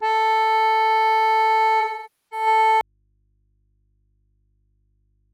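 From 1.80 to 2.46 s the music turns smeared and noisy for about half a second. This is AAC frame loss with concealment. Coded frames went missing, which fits a run of about a dozen, and the decoder rebuilt the gap from the last good spectrum, so the detail blurs into a phasey wash. On a spectrogram the band looks stretched and textureless, with harmonics held flat. Normal content then returns.

At 2.81 s the music cuts out abruptly and does not come back before the end. It is an audio dropout to a faint residue, with only a low hum around 45 dB below the music's level left in the gap. The likely cause is that the source signal was lost while the downstream path stayed live, so an open input kept feeding mains hum. The waveform drops in a single step to a near-flat line. A spectrogram shows everything vanishing except thin, steady low-frequency lines.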